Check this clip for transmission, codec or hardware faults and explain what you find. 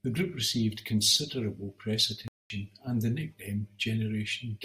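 One fault is present. Playback stall, 2.28 to 2.50 s: the speech cuts to silence for about 221 ms, likely because the player ran short of data or its thread was blocked, then resumes.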